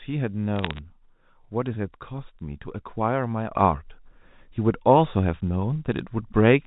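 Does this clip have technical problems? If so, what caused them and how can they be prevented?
Yes. Bit errors on a digital phone line: between 0.56 and 0.79 s, a few bits in every thousand were flipped on the G.711 mu-law link. Each flip corrupts a single logarithmic sample, so the speech picks up a brief burst of sharp ticks and crackle while its tone stays the same. Error-correcting or error-concealing transmission, or a cleaner line, prevents this.

Sudden gain jump: at 3.52 s the level steps up by about 8 dB and stays there to the end. The cause is likely a digital gain change applied between one sample and the next with no ramp. Speech and background noise rise together at that instant. Applying gain changes with a short fade of a few milliseconds prevents the step.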